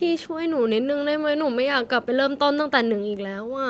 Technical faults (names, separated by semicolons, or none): none